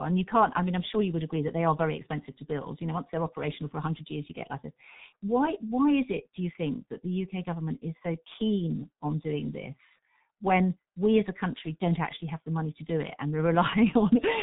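Throughout the speech, G.723.1 codec damage is heavy: nothing survives above 3.8 kHz, and the slow 30 ms frame updates leave a hoarse, smeared voice with blurred consonants, consistent with roughly 6 kbit/s. A plain low-pass filter would muffle without this rasp.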